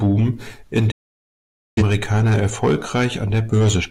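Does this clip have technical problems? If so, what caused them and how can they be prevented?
Yes. A digital broadcast dropout occurs from 0.91 to 1.83 s: the receiver stopped getting decodable frames, either through signal loss or failed checksums, and muted its output until valid frames resumed. The speech fades out within about 8 ms and then stays silent for roughly 0.85 s, a gap that fits around twenty lost frames, before resuming mid-programme with that stretch of speech gone for good. Stronger reception, through better antenna placement or a more robust transmission mode, would prevent it.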